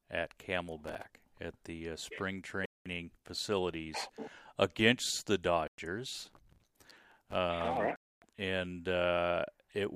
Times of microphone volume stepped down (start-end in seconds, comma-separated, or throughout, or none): none